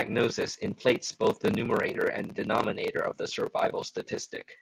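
Clock drift between sender and receiver runs throughout this speech clip. The sending device's audio clock is fast, by something like five percent, compared with the receiving end. More samples arrive than the receiver plays out in the same time, so its jitter buffer keeps filling. Because the two clocks never agree, the whole stream carries an unsteady, slightly rushed timing rather than one clean break.

Repeated timing corrections begin at 0.19 s and continue to the end of the clip. To keep the overfilling buffer in check, the receiver keeps discarding short slivers of audio, all in the same direction and at uneven spacing, which nets out to playback at about 103 percent of normal speed. Each cut is small, so it is heard as faint hiccups and a tempo that lurches forward now and then.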